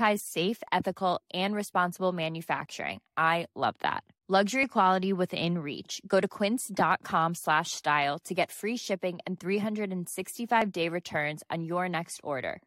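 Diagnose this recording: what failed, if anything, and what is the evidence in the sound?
The failure sits in streaming playback: an overlap between stream segments. Tiny skips land at 0.68, 2.66 and 10.62 s, each removing about 6 ms of speech. Their spacing matches 2-second segment boundaries, and the player trims audio it wrongly treats as duplicated. Unlike a dropout, there is no silent gap, only an abrupt jump.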